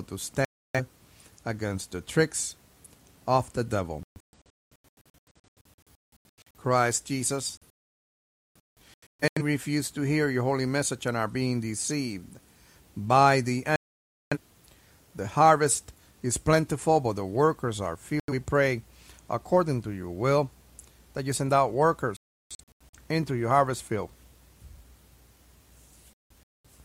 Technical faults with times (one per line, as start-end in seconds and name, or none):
0.45-0.80 digital broadcast dropout
4.03-6.59 digital broadcast dropout
7.57-9.42 digital broadcast dropout
13.76-14.37 digital broadcast dropout
18.20-18.33 digital broadcast dropout
22.17-22.97 digital broadcast dropout
26.13-26.69 digital broadcast dropout